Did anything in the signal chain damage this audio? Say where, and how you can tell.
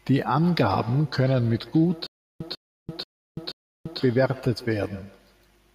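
Yes, two things. First, call processing: from 0.34 s to 5.49 s there's a feedback echo between two devices. Each stretch of speech comes back about 150 ms later, thinner and more ringing, peaking at about -20 dB below the direct speech. That's two devices on the same call in one room. One plays out what the other's mic sent, that mic hears it again, and neither echo canceller touches it because each only removes its own device's playback.

Second, a stutter with silent gaps from 2.07 s to 4.00 s. A 145.5 ms fragment repeats four times on an even 483.6 ms cycle, each repeat followed by about 338 ms of dead digital silence. That pattern likely comes from a stalled stream or player buffer: on each retry it replays the last chunk it holds, then runs dry. Whatever speech should have filled those gaps is gone, not delayed.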